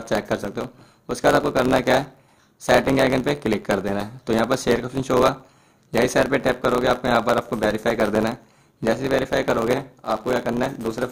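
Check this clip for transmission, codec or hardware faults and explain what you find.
There is one fault, a block size mismatch (truncated), present for the whole clip. One stage hands over longer blocks than the next stage takes in, and the tail of each block is discarded. The rate points to blocks of about 512 samples. Every cut leaves a discontinuity, so a buzz at about 91.9 Hz rides over the audio. Dropping the tails also makes everything run 1.07 times fast while the pitch stays roughly normal.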